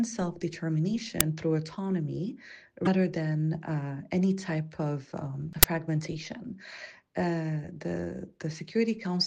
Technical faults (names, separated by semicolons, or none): uninitialised buffer; broken MP3 bit reservoir